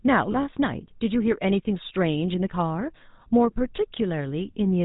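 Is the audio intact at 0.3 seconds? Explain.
No. Right at 0.3 s the sound is already carrying GSM full-rate codec damage, and a lost GSM frame follows almost immediately, from 0.32 to 0.35 s.

The codec damage runs through the whole clip and is plainly audible. This coder models the vocal tract as a filter and excites it with a regular pulse train that keeps only one excitation sample in three, so the voice comes out buzzy and gravelly. Nothing above 4 kHz survives, which fits the 13 kbps full-rate coder. That fixed texture separates it from a merely band-limited telephone line, which sounds muffled but smooth rather than rough.

Just after 0.3 s, one bad frame is concealed. For about 20 ms, consistent with a single GSM frame, the decoder reuses the previous good frame's settings. The result is a brief metallic, ringing smear held over the gap. Because the loss is this short, it never decays to silence. 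Unlike a packet-loss click or dropout in other codecs, the gap is filled with a stretched, buzzy echo of the sound just before it rather than left empty.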